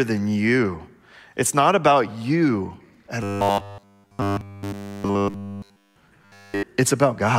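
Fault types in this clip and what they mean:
Robotic sound from repeated short buffers: new audio is likely arriving too seldom, so playback keeps looping the last 10 ms or so of signal in place of the material that never came, forcing a steady 100 Hz buzz onto everything. Right after "you at", from 3.23 to 5.96 s, and again from 6.22 to 6.63 s, the speech becomes an almost entirely repeated, rigid metallic drone that only loosely follows the words.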